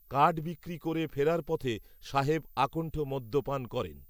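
A speech recording carries a switching supply whistle throughout: a faint high whine, about 35 dB below the signal, wandering between 13.8 and 15 kHz. The drifting pitch, from a switching power supply running in audible burst mode or beating with another, sets it apart from a fixed-frequency interference tone.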